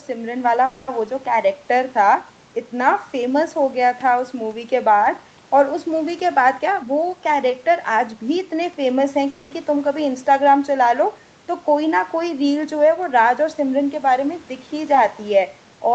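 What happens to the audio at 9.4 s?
At 9.4 s there is a call audio freeze, running from 9.30 to 9.53 s. The speech stops moving and the last sound is stretched into a fading buzz or hiss for about 210 ms, without dropping to silence. Then the speech resumes where it left off. Nothing is lost. The audio simply runs about 210 ms later from that point. The likely cause is packets held up in transit, leaving the jitter buffer empty until they arrived.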